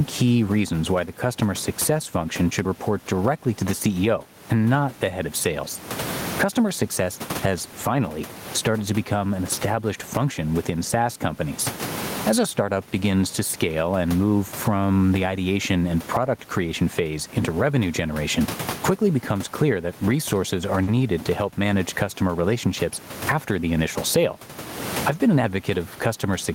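It's a speech recording, and all the way through the level gets yanked down on every loud sound, swinging by something like 20 dB, so loud and soft parts end up close together and it sounds squashed. That's gain pumping, most likely from the input gain being set far too high for the mic, with a fast limiter or compressor clamping down each time. There's also a short stall from a late packet between 20.83 and 20.89 s, right after "clear that resources are" and before "to help manage customer". A packet didn't arrive on time, the jitter buffer ran dry, and the receiver held the last sound for about 40 ms until it showed up, then carried on from the same spot, so nothing's missing, just a bit stretched. The room noise underneath sits about 29 dB below the speech.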